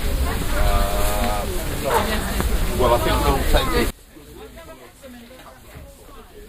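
Sudden gain jump at 3.90 s: the level drops by about 23 dB in a single step and stays down until the end of the clip. There is no fade; the sound and its background noise fall together, instantly, as though a different gain value took effect between one sample and the next. The likely cause is a gain setting or bit shift applied without any ramp, leaving the final stretch much quieter than what came before.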